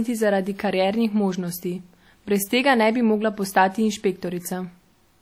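All the way through, the speech has that ringing, washy smear of likely WMA compression. The transform blocks spread quantisation noise across tens of milliseconds, so a hiss breathes along with the voice. The damage is plainly audible, which fits roughly 48 kbps, though content still reaches 20.1 kHz.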